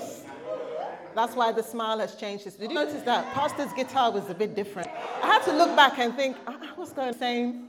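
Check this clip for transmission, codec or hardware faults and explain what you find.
The clip has one fault type, damaged data in a compressed stream, heard at 2.75 s, 4.81–4.86 s and 7.09–7.14 s. Corrupted bytes make the decoder misread frames and lose sync, producing brief glitches heard as a chirp, squawk, click or short hole.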